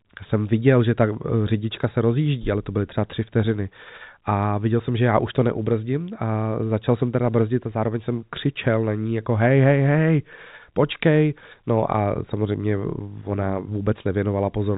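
No technical faults can be heard in this recording.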